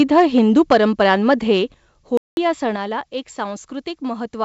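In a short speech recording, the likely cause of the first fault is a microphone input gain set about 6 dB too high. From 0.0 to 1.34 s the loudest peaks run into the converter's ceiling, so a small share of the waveform has its tops flattened. That is microphone overload, heard as a harsh, crackly edge on the strongest syllables. The calling software then likely reacted to those hot levels by lowering the device's input volume in discrete steps. There is a cut of about 3 dB at 0.73 s, during the clipped stretch, then about 5 dB at 1.74 s and another 5 dB at 2.76 s. Each microphone volume step-down makes the voice and the room behind it drop together, abruptly rather than with a smooth fade. At 2.17 s the output goes silent for roughly 0.2 s until 2.37 s, a playback stall that likely comes from the player running dry of buffered data or its audio thread being held up. The speech breaks off mid-flow and resumes once playback recovers. 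Throughout, the call path's G.722 coding leaves nothing above 8 kHz, so the top end is band-limited.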